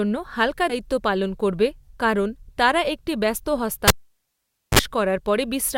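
At 0.69 to 0.74 s, compressed frames are skipped. About three 20 ms frames drop out, so roughly 70 ms of speech vanishes at an abrupt join, visible as a sudden break in the spectrogram's harmonic lines.

From 3.88 to 4.79 s, a cable is pulled and plugged in. A pop leads into about 0.86 s of near silence, then 43 ms of 50 Hz mains buzz before a second pop. The waveform shows a flat gap between two spikes, and the spectrogram shows the buzz as low horizontal bands.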